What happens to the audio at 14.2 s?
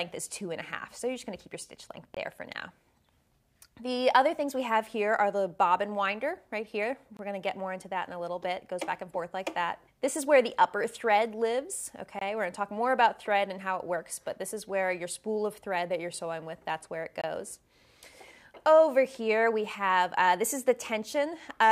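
Nothing goes wrong at 14.2 s; the audio is intact at that moment.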